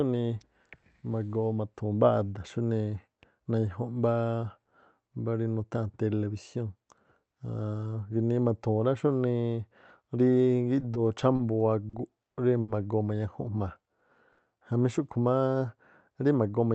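Speech carried over a call codec whose audio stops near 8 kHz has two kinds of fault. At 11.36, 11.89, 12.61 and 14.32 s a late packet emptied the jitter buffer, causing short stalls from a late packet. The receiver held the last sound for 30, 40, 70 and 60 ms, so each moment drags with a faint buzz or dip. From 16.34 to 16.74 s, a jitter buffer speed-up trimmed around 50 ms of pitch-period slices to reduce the built-up delay, making the speech run at 111% speed, hurried but at unchanged pitch.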